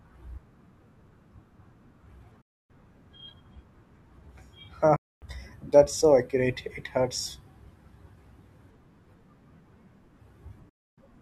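The speech cuts out to silence three times, from 2.41 to 2.70 s, 4.96 to 5.22 s and 10.69 to 10.98 s, each gap lasting about a quarter of a second. When the sound returns, it picks up further along rather than where it stopped, so the missing stretch is lost rather than delayed. This is likely a Bluetooth dropout: runs of audio packets reached the headphones too late and were discarded, and each gap is long enough to suggest roughly a dozen packets lost.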